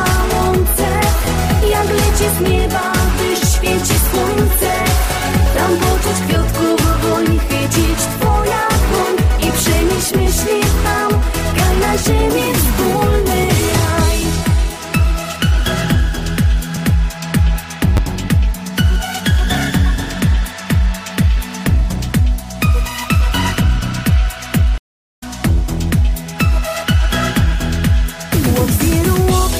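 At 1.25 to 1.27 s, 4.63 s, 16.76 s and 17.97 to 17.99 s you get repeated buffers. New audio didn't show up in time, so the device replayed the last 10 ms chunk, twice at 1.25 and 17.97 and once at the other two. With a chunk that small, each one comes across as a quick click or tiny buzz rather than a clear stutter. A little of the real audio gets skipped each time, around 10 to 20 ms.

Then at 24.78 s there's a stream reconnect. The connection dropped, the player went quiet for 386 ms, reconnected and started a fresh decoder partway through the stream. When sound returns at about 25.23 s, it has jumped ahead by roughly 0.4 s, so that stretch is simply gone, and the first moment after the gap comes in muted or fading up rather than at full level.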